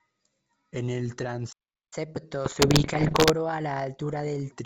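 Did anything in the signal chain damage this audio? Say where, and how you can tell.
Yes. A playback stall cuts the speech off mid-flow from 1.52 to 1.93 s, a gap of about 0.4 s of silence before the sound resumes. This is a playback or buffer-stage fault. The output had nothing to play, most likely because the player's buffer ran dry or its audio thread was blocked, and it held silence until data arrived again.

Catch-up at higher speed follows immediately, from 1.93 to 4.52 s. The speech runs at 1.15 times normal speed, and its pitch rises by roughly two semitones. Both return to normal at the end. This also happens at the playback stage. To work off the backlog left by the stall, the player resamples rather than time-stretches, so tempo and pitch go up together.

Bit errors on an ADPCM link appear from 2.45 to 3.34 s as pops, rough bursts and short jumps in level, affecting around two percent of bits. 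This is damage on the transmission link. On a G.722 path, which is running at 64 kbit/s with clear wideband speech, each flipped bit corrupts the decoder's step size and predictor state. Every error therefore rings on for several milliseconds instead of staying a single click.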